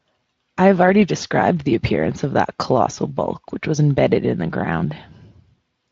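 No technical faults can be heard in this speech clip. It has passed through a Speex codec, which leaves nothing above about 7.7 kHz and at most faint coding damage.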